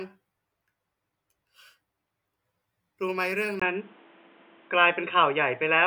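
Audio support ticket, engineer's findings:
Speech turns dull and boxy from 3.60 s to end of clip; short dropout of about 20 ms at the change. Likely cause: input switched to a poorer device mid-recording. New path passes nothing above 3.8 kHz, brings its own tone and a noise floor roughly 30 dB under the speech, and a level shift of around 5 dB. Spectrogram: hard ceiling at 3.8 kHz from 3.60 s, thin gap at the seam, raised noise band. Waveform: step in amplitude at the switch.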